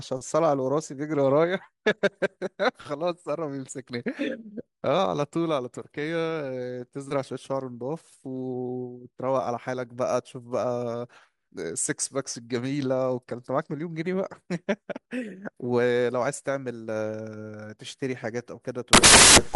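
At 18.93 s the speech gives way to loud, harsh broadband noise until the end at 19.56 s. These are samples built from the wrong bytes. Each value is assembled wrongly, so the fast-changing low bits dominate.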